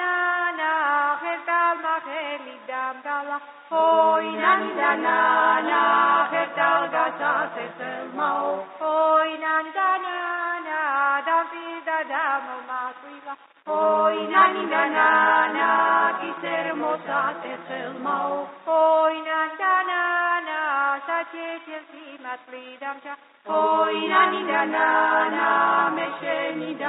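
No technical faults can be heard anywhere in this audio. Nothing in it calls for a timestamp or a closer listen.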